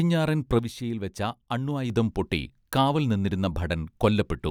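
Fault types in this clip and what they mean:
One channel drops out: one side of the stereo feed likely went dead from 0.59 to 1.90 s, so the mono sum lost half its contribution and the speech fell abruptly by about 6 dB until it returned.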